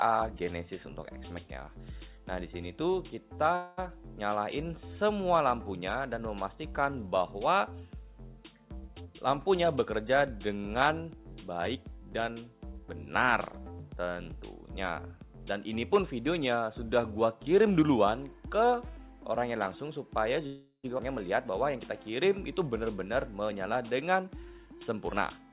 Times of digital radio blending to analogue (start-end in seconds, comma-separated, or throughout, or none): none